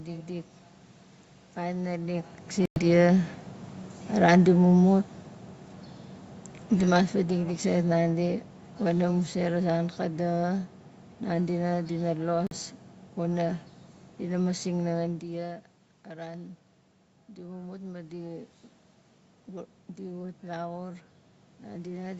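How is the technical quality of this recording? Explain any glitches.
The recording has three kinds of glitch: two short dropouts, a slow drop in level and a later slow rise in level. The sound stops at about 8 kHz, as call microphone processing does.

Bluetooth dropout, at 2.65 to 2.84 s and 12.47 to 12.57 s. The sound cuts to silence, then resumes as if it had kept playing. The likely cause is wireless audio packets arriving too late and being discarded. The first hole is the longer one, about a tenth of a second of lost sound. The second loses under 50 ms.

Automatic gain falling, from 6.73 to 13.25 s. Over more than six seconds, everything gets steadily quieter, ending about 6 dB down. The automatic gain control judged the input too loud, or its background too strong, and eased its gain down bit by bit. The talker and the room background sink together. That shows it is the gain stage and not the talker moving. 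The second dropout falls inside this slide.

Automatic gain rising, from 15.3 to 18.59 s. Around 15 s the talker moves away and the input drops by about 14 dB. The automatic gain control then raises its gain gradually, by about 4 dB over roughly three seconds. The voice and the room noise swell up together. The rise makes up only part of the loss, so the sound stays quieter than before the move.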